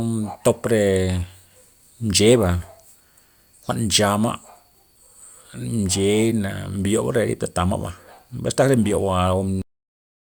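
The speech runs normally until 9.62 s, where it stops abruptly in the middle of a sound and falls straight into digital silence for the remaining 0.73 s, with no natural decay or tail. This is a cut-off end: the final stretch of audio was never written to the file or played out, most plausibly because the closing buffers were dropped when recording or playback stopped, so the waveform simply ends rather than fading.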